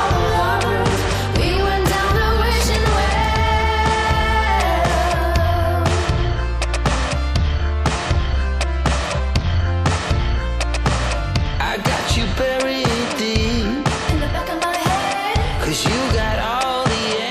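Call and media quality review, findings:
No audible faults found.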